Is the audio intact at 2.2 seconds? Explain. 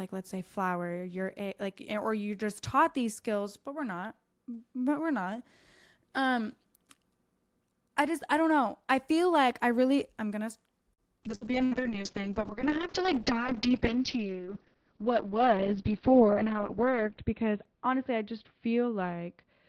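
Yes, the speech at 2.2 seconds comes through intact, with no dropout, click, distortion or other fault at that moment.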